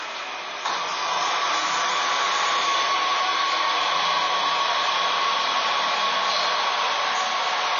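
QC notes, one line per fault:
Throughout, AAC compression: nothing is present above 6.9 kHz, so the audio sounds dull, and the codec damage is plainly audible as smeared, warbling, fizzy texture on sustained and noisy parts. This is likely low-bitrate AAC-LC, consistent with roughly 24 kbps, where too few bits force a lowered cut-off and coarse quantisation. A spectrogram would show a hard ceiling at 6.9 kHz with patchy holes and blotchy noise-filled bands below it.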